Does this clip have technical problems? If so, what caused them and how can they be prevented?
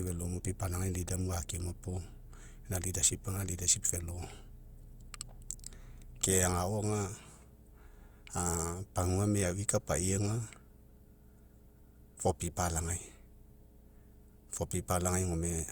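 Yes. A ground loop or nearby transformer has coupled the 60 Hz power line into the signal path, so a steady low mains hum, about 25 dB below the speech, runs under the whole recording with a few low harmonics above it. Preventing it means keeping all equipment on one grounded outlet, using balanced cables or a ground-loop isolator, and routing audio leads away from power supplies.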